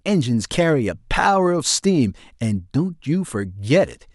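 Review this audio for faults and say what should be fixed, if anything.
No faults can be heard; nothing needs fixing.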